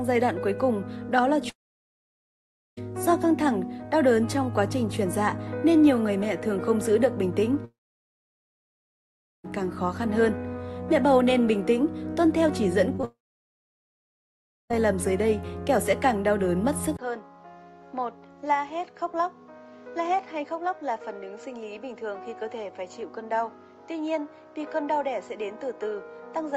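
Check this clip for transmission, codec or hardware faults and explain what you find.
Three kinds of fault are present, all on audio carried over what sounds like a call codec path with an upper limit near 12 kHz.

Long network dropout, 1.49 to 2.79 s, 7.65 to 9.46 s and 13.05 to 14.72 s: the sound is carried on as a fading buzz, then 1.2 to 1.7 s of near silence, and resumes further on. A likely stream interruption with concealment giving out. Unlike short concealed losses, the gap is not bridged.

Short concealed packet loss, 12.96 to 13.00 s and 13.02 to 13.05 s: two brief holes, each filled by extending the preceding sound and blending back in, heard as a quick smear or wobble. They run straight into the third dropout, but each lasts only hundredths of a second with no fade to silence.

Input switched to a poorer device, at 16.97 s through the end: a 20 ms silence, then the sound turns dull and boxy with nothing above 7.6 kHz, about 10 dB quieter, over a new steady background noise. 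The likely cause is a change to a narrower-band microphone or headset. A codec band limit would not also shift level and noise at one instant.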